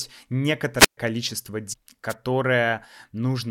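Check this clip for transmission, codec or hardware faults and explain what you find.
Three faults of two kinds are present in the speech.

A wireless microphone squelch dropout occurs at 0.78 to 0.97 s, and again at 2.09 to 2.15 s. The radio signal weakens, hiss rises, and the receiver's squelch mutes the output. The first mute lasts about 128 ms; the second is a gap well under a millisecond.

Damaged data in the compressed stream appears at 1.72 to 1.74 s. Corrupt bytes make the decoder misread the frame and lose sync before it finds the next header. The result is a short chirp or blip.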